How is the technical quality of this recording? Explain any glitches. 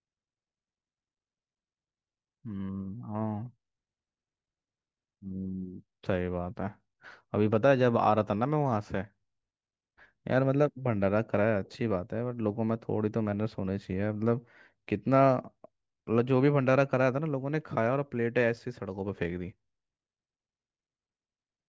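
Nothing in the recording sounds wrong to my ear; there are no glitches to point out.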